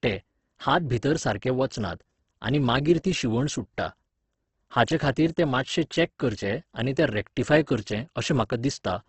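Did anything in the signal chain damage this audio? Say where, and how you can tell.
Yes. The damage sits at the codec stage and runs through the whole speech clip: heavy Opus compression, likely from an encode at a low bitrate that fits roughly 12 kbps in CELT mode. Nothing is present above about 8.2 kHz, giving a wideband ceiling. The voice sounds rough and grainy rather than swirly, because the encoder preserves each band's energy but fills the starved bands with folded or noise-like content.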